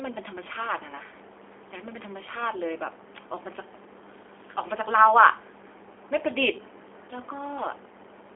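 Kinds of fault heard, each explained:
G.729 codec: the speech is rebuilt from a vocal tract filter, a pitch predictor and sparse pulses, giving a plainly rough, synthetic tone that fits an 8 kbit/s G.729A stream. A spectrogram shows energy confined between 300 Hz and 3.5 kHz, with smeared harmonics.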